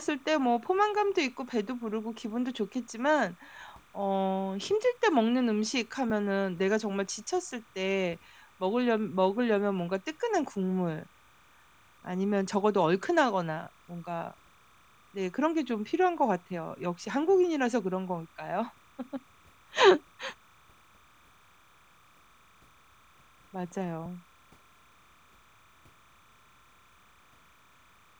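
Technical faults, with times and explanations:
Throughout, timecode bleed: there's a thin chirping warble sitting under the speech the whole way, flipping between pitches around 1 kHz and 2 kHz. That's linear timecode leaking in from a neighbouring track or cable. The code is a square wave whose pitch switches with the bit pattern, and the frame rhythm here sounds like 30 frames per second. It's low, about 35 dB under the voice.
Throughout, low bit depth without dither: the speech has a grainy, gritty edge that moves with the voice and gets worse as it quiets, with soft tails breaking up into a rough buzz rather than fading smoothly. The error sits about 40 dB down. The likely cause is audio squeezed to very few bits, roughly 10-bit, and truncated with no dither. The rounding error then tracks the signal as distortion instead of staying a steady hiss.
6.1 s and 24.06 s, dropped buffer (overrun): at each of these points the speech jumps forward with no gap, losing something like 20 ms. 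That fits a buffer that wasn't read out before the hardware overwrote it. The missing piece is simply gone and the two sides are butted together. The missing slice makes the little skip.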